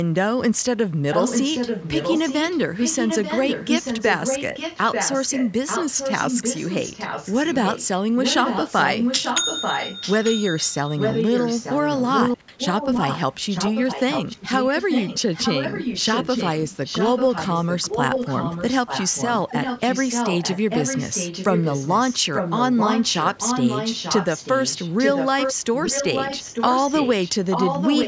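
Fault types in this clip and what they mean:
Echo leak: A delayed second copy of the speech trails the original by about 0.89 s. It is only a little quieter than the direct sound. It runs from 1.11 s to 7.87 s, breaks briefly, then returns at 8.2 s and lasts to the end. The likely cause is a far end playing the call on a loudspeaker, with its echo canceller failing to remove what its microphone picked up.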